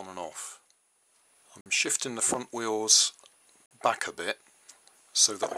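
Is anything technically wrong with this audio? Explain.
Yes. There are two gaps between chunks, from 1.61 to 1.66 s and from 3.66 to 3.71 s. The audio arrives in 2.0 s blocks, and 50 ms of silence is left after each block before the next one starts. Nothing is cut out. The sound simply stops and then resumes. Each gap is a short hole with abrupt edges. The two holes are evenly spaced, about 2 s apart, giving a regular stutter.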